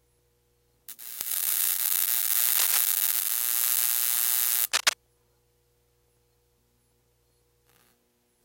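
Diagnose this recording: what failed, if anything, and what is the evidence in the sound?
Two bit error spikes point to a fault in the digital path: a single sharp tick at 1.21 s peaking at about -4 dBFS, and another at 4.16 s at about -16 dBFS. Each lasts only three samples. A flipped bit briefly throws the sample value by a power of two before it snaps back, giving a broadband click unrelated to the sound.

Cable scratch noise points to the analogue wiring. Between 2.48 and 2.78 s, and again between 4.72 and 4.93 s, dense, irregular rustling sits over the sound, the first a little below the signal level and the second roughly level with it. This is likely a worn cable, connector or control being moved, making contact resistance fluctuate rapidly.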